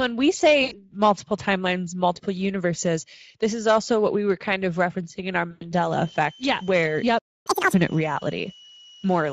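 It's a speech clip, and the whole thing is coloured by the Speex codec at 16.8 kbps. The damage is plainly audible: the voice comes out hoarse and grainy, with that noisy, slightly synthetic edge you get when a CELP coder is short of bits for the excitation. There are two spots of VoIP packet loss concealed by the speech codec. The first runs from 0.63 to 0.92 s, about 80 ms of missing audio, right before "multiple timelines multiple universes". The second runs from 5.51 to 5.64 s, about 100 ms, just after "of referencing in our". In both, the decoder keeps extrapolating its last pitch and filter while turning the gain down, so you hear a stretched, fading smear, and the voice stays a bit off for a moment after real packets come back. From 5.92 s to the end there's a switching supply whistle, a thin tone around 3 kHz wandering between roughly 2.9 and 3.1 kHz, sitting about 25 dB below the speech. 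At 7.18 s the audio just stops for about 270 ms, a playback stall that was likely the player running dry or its thread getting blocked. Then from 7.47 to 7.74 s there's catch-up at higher speed: the backlog plays at double speed, with pitch jumping roughly ten semitones, before dropping back to normal.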